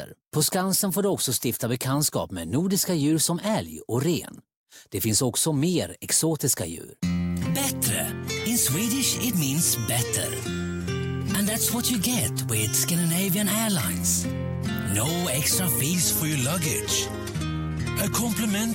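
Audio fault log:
15.94–18.75 s: section at the wrong speed. From 15.94 s to the end the audio runs at 0.893 times its original speed, so it turns slower and roughly two semitones lower together, likely from a segment played against the wrong clock rate.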